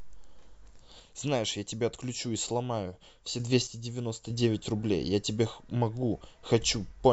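From 1.00 to 3.40 s the speech level falls abruptly by about 6 dB and then snaps back. The same drop recurs from 3.67 to 4.30 s. Both dips are flat, sudden steps rather than fades. The likely cause is one channel dropping out: with one side of the stereo pair gone, the mono sum carries only half the shared signal, and anything present only in the lost channel vanishes for that stretch.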